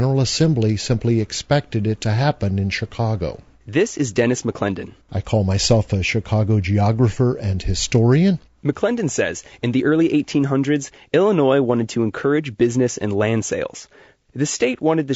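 Throughout, the speech sounds rough and grainy, with noise between harmonics. This likely comes from low-delay AAC compression, its short frames starved at roughly 32 kbps.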